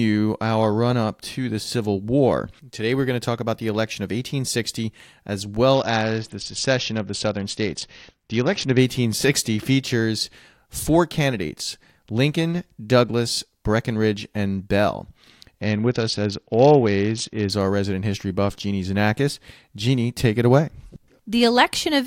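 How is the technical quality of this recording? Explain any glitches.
Two stretches lose quality, from 5.74 to 8.79 s and from 15.61 to 17.50 s, just before "our resident history buff". The treble goes dull and a gritty noise rises, then both clear. This is a Bluetooth SBC bit pool drop. A congested link forced fewer bits per frame, starving the high sub-bands and coarsely quantising the rest, which fits a fall to a bit pool near 7 and about 66 kbps.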